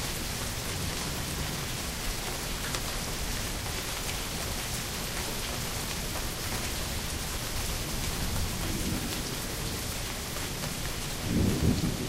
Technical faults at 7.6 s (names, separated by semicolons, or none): none